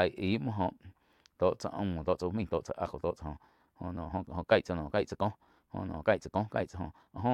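Speech clip with a time-stretched section from 2.02 s to the end: the pace jumps to about 1.52 times faster at unchanged pitch, sounding rushed, likely from software squeezing it to fit.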